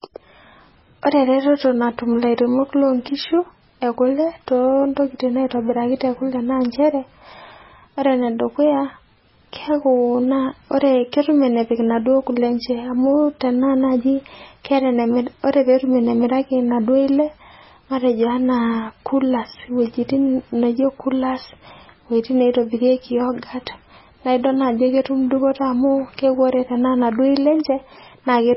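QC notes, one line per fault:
Throughout, MP3 compression: nothing survives above about 5.6 kHz, and the sound has a heavy watery, swirling quality with smeared onsets, which fits a likely low bitrate near 16 kbps. A spectrogram shows a flat ceiling at 5.6 kHz and patchy, flickering blocks below it.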